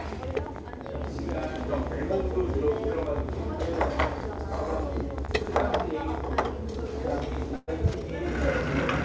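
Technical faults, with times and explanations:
0.06 to 7.43 s, train of clicks. Irregular ticking, roughly a hundred pulses at about 15 per second, rides over the sound and through its pauses. The clicks peak at about 10 dB above the audio. Likely interference from nearby equipment or a faulty connection or power supply.
5.26 s, short concealed packet loss. About 20 ms of audio never arrived. The receiver extended the preceding sound to cover the hole, then blended back. It is heard as a brief smear or wobble, and that sliver is gone.
7.56 to 7.69 s, burst of packet loss. About 120 ms went missing. The receiver continued the last sound for roughly 115 ms, fading it as a held buzz or hiss, with a short silence. The audio resumes further on, skipping the lost part.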